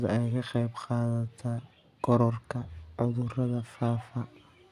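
No technical faults can be heard anywhere in the speech. Nothing in the audio calls for a fix.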